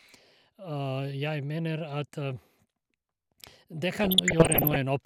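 DAB burbling hits this speech recording from 4.04 to 4.76 s: residual bit errors, around one percent, slip past error correction into the MP2 stream, corrupting scale factors and samples so individual sub-bands leap in level frame by frame, producing bubbling, chirping squelches.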